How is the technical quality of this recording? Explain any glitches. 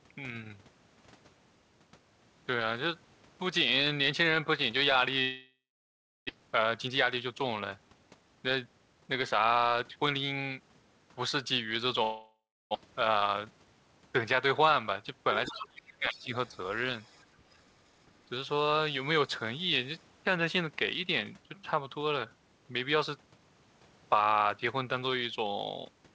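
The speech has clear call-path faults: two gaps where audio is lost, hurried stretches after each gap, a dip in the talker's level, and faint scraps of a second voice. The G.722 call path at 64 kbps carries the speech with nothing above 8 kHz.

From 5.22 to 6.31 s the sound smears into a fading buzz, then goes silent for about 0.66 s before speech resumes with a piece missing. The same happens from 12.03 to 12.77 s, with about 0.3 s of silence. These are long network dropouts, likely from packets failing to arrive. The receiver extended the last audio as a decaying fill, then gave up, and about 0.6 s of speech was never played each time.

From 6.34 to 10.61 s, and again from 12.84 to 13.58 s, the speech runs about 10% fast at unchanged pitch and sounds rushed. This is jitter buffer speed-up. After each dropout, delayed audio arrived in a bunch, leaving the buffer too full. The receiver trimmed many short pitch-period slices to drain it, cutting roughly 0.4 s in the first stretch and about 0.07 s in the second.

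Between 15.47 and 16.32 s the talker's level sinks and partly drops away, by about 25 dB at its deepest and over roughly 0.7 s in total. The likely cause is speech suppressed in double talk. The far side was talking at the same moment, and the echo canceller could not tell the local voice from loudspeaker echo, so it turned everything down.

Faint fragments of another voice appear at 15.59 to 15.68 s, about 15 dB below the speech, and then at 16.47 to 16.51 s, 16.68 to 17.25 s and 17.51 to 17.57 s, about 35 to 40 dB down. This is likely the other side's voice leaking through. The far talker played from a loudspeaker and reached the microphone, and the echo canceller left remnants behind.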